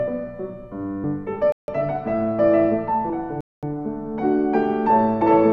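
At 1.04 s and 5.22 s the audio jumps abruptly. This is audio missing between chunks, likely from roughly a tenth of a second lost at 2-second chunk boundaries. Each shows as a hard vertical seam in waveform and spectrogram.

At 1.52 to 1.68 s (158 ms) and 3.41 to 3.63 s (221 ms), Bluetooth stalls drop the sound to silence. These are likely packet delays draining the playback buffer, seen as flat-line gaps and blank spectrogram columns.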